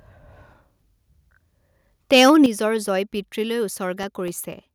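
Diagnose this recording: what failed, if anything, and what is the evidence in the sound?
Converter stage. From 2.12 to 2.46 s the loudest speech peaks sound flattened, with a harsh, crackling edge. This is likely microphone overload. The input gain drove the signal about 5 dB past the converter's full scale. The tops of the waveform were sliced off flat, and a few percent of samples sit pinned at the limit. That squaring of the peaks adds the gritty distortion heard on those syllables.

Call processing stage. At 2.46 s, right as the distorted stretch ends, the whole level drops abruptly by about 9 dB. Speech and background fall together, in one step rather than a fade. This is likely the microphone volume stepped down by the call software. It detected the clipping and cut the input gain at once. The timing directly after the overloaded peaks points to that reaction rather than to a change at the source.

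Driver or buffer stage. Between 3.78 and 4.53 s there are about four small ticks, spaced evenly every 0.25 s. Each is a gap of around a millisecond where the audio is replaced by silence. These are periodic USB or driver dropouts. Something stalls the bus or driver at a fixed interval, and the audio due in that moment is lost. The strict regularity points to a recurring background task, not to random interference.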